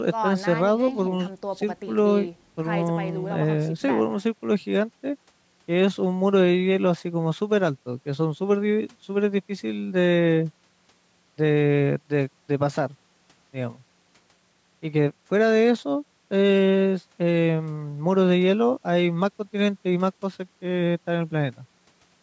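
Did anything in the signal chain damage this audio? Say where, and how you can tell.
No, nothing damaged this audio.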